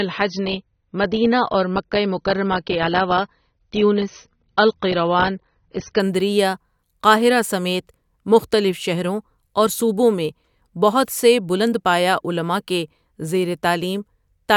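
Speech that sounds dull and smeared for the first 6.0 s, with nothing above 6.3 kHz, then suddenly brightens with no gap: an adaptive stream starting at a low bitrate, fitting roughly 27 kbit/s AAC, then stepping up to about 96 kbit/s.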